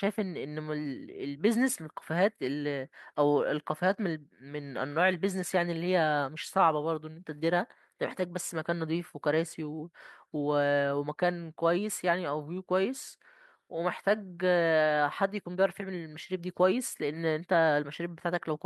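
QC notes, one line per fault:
No audible faults found.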